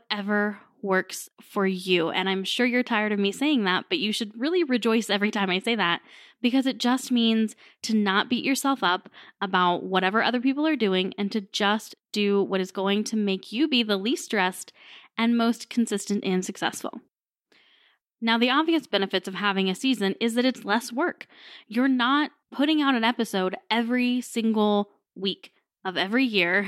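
A speech recording with no audible technical faults.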